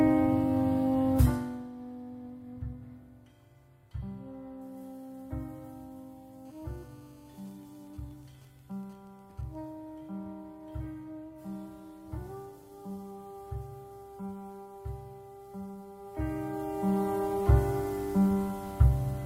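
From 6.45 to 7.41 s a GSM phone buzz cuts in, a hard, raspy tone at 217 Hz thick with harmonics, about 23 dB below the signal. A nearby 2G handset on a call pulses its transmitter 217 times a second, and the audio circuitry rectifies those pulses into audible sound.

Immediately after, from 7.46 to 9.56 s, GSM signalling bursts take over: even ticks with a longer 217 Hz buzz twice a second, roughly 20 dB down. The phone is still on the call but its user has gone silent, so it sends only short groups of bursts, which are rectified the same way.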